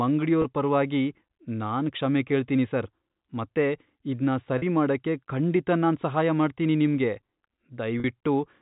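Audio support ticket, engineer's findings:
Packet loss with pitch repetition, three dropouts. 0.42 s: about 20 ms, fits a single lost packet. Quick buzzy hold. 4.58 s and 8.0 s: about 40 ms each, fits two back-to-back packets. Longer held, slightly droning note. Likely the receiver's concealment looping the last pitch period to bridge the gap. Jitter buffer or network path is the place to look. G.711 mu-law band-limiting to 4 kHz, as expected for the path.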